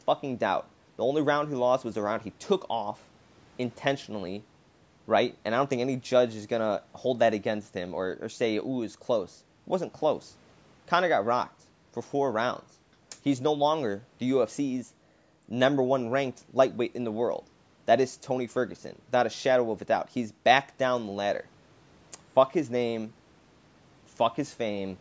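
The speech signal shows no technical faults, and what can be heard of the call microphone processing, with the lowest bass trimmed and nothing above about 8 kHz, is that path working as intended.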